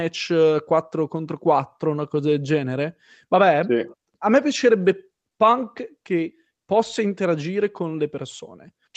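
No technical faults are audible.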